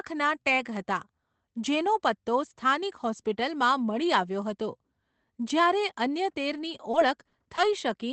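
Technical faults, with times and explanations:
6.53–7.59 s, repeated packet loss (robotic sound): audio packets kept going missing, five short holes, the longest 40 ms, about 11% of the span. Each was patched by extending the preceding sound, so this stretch turns choppy, with fragments dropping out.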